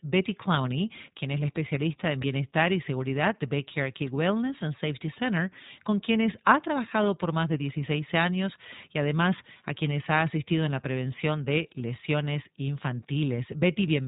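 The iLBC codec runs throughout the speech, and its damage is plainly audible. Everything above about 3.8 kHz is gone, leaving a muffled, telephone-band sound. Each short frame's excitation is coded on its own rather than predicted from the last, and the result is a slightly rough, synthetic grain on the voice. The texture points to 20 ms frames, which fits the 15.2 kbps mode.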